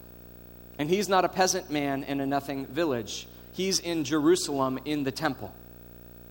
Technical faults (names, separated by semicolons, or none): video or display buzz